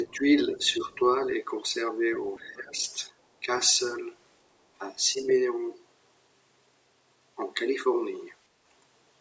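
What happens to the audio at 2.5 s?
From 2.13 to 2.49 s, a faint second voice bleeds in, far quieter than the main speech. This is other side's voice leaking through. The far end's audio was likely played on a loudspeaker and not fully cancelled from the microphone.

From 2.42 to 2.82 s, the main speech is suppressed in double talk. It dips by around 15 dB in pieces, for about a third of a second in total. With both sides talking at once, the echo canceller likely turned everything down.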